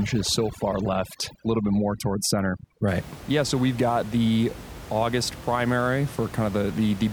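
A speech clip whose opening, from the start to about 2.88 s, has the background dropping away and breaking up into twinkling specks scattered through the gaps. That is overdone noise removal: the noise reducer was pushed so hard that any frequency band sitting close to its noise estimate gets driven down or switched off, taking the quieter parts of the voice with it. After that point the room noise returns, about 15 dB below the speech.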